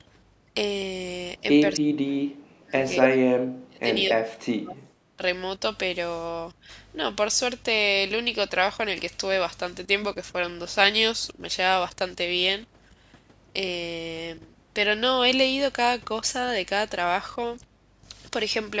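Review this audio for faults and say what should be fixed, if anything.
Speech suppressed in double talk at 1.77–2.25, 2.55–2.76, 3.02–3.34, 3.67–3.9, 4.1–4.96 and 5.16–5.22 s. The speech drops by up to about 40 dB, likely because the echo canceller mistook it for loudspeaker echo. On the waveform and spectrogram this appears as near-empty gaps or faded patches within the speech. To prevent it, use an echo canceller with stronger double-talk detection, or a headset so there is less loudspeaker echo to cancel.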